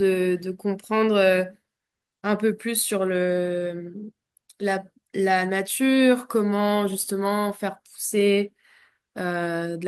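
No technical faults are audible anywhere in the recording.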